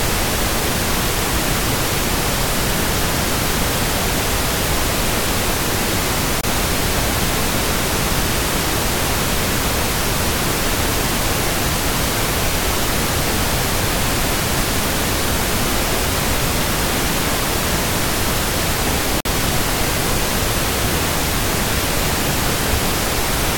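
At 6.41 s the sound cuts out for about 23 ms, and again at 19.20 s for about 46 ms, with playback resuming as if it had kept going, likely a Bluetooth dropout, where late packets get discarded and the output goes silent.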